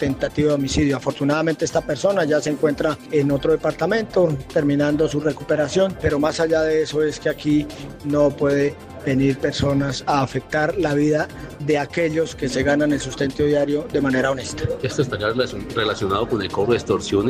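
Nothing in the audio stands out as a technical fault, so there's nothing here to flag.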